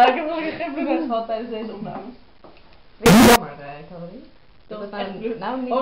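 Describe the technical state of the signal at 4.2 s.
Nothing goes wrong with the signal at 4.2 s; it is intact at that moment.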